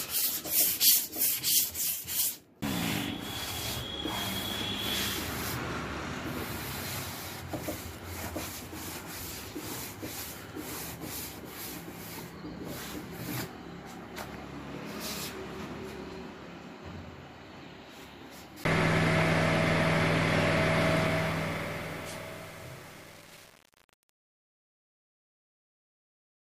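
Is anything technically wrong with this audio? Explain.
Yes, there's truncation distortion on the fade-out at the end. From about 20.90 s through to the end at 26.49 s, the level drops away over roughly the last 5.6 seconds. But the gain stage doing it keeps too few bits and adds no dither, and the coarseness points to something like 7 bits. As the sound gets quiet, the waveform collapses into a handful of square steps, so the tail turns gritty.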